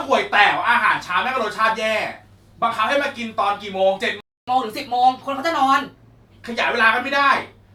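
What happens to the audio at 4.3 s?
Speech drops to silence from 4.21 to 4.48 s, then resumes: a 270 ms playback stall, likely from the player running out of data or its thread blocking.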